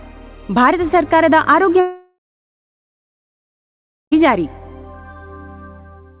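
A long network dropout runs from 1.8 s to about 4.14 s, likely caused by the connection stalling so that roughly 2.3 s of audio never reached the receiver. The player bridges the gap by extending the last sound into a short buzz or hiss that fades, then leaves about 1.9 s of silence before the audio resumes further on, with the missing stretch simply gone. Throughout, nothing is heard above 4 kHz, which fits a narrowband telephone codec.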